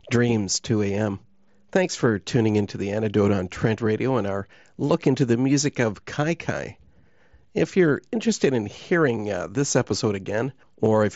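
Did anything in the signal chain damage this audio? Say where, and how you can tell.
No, nothing in the signal chain damaged this speech, which passed through a Bluetooth mSBC headset codec working as normal.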